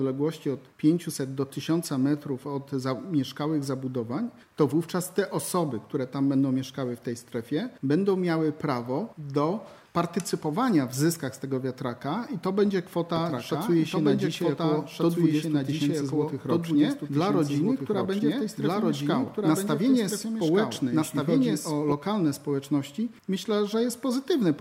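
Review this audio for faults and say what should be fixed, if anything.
From 13.16 s to 21.92 s the sound is doubled: a second, equally loud, full-band copy trails about a second and a half behind, dry and uncoloured, cutting in and out abruptly. This doubled audio track is likely a second capture path or misaligned edit layering two copies. Remove the duplicate by routing each source through only one input path and checking edits for stacked regions before export.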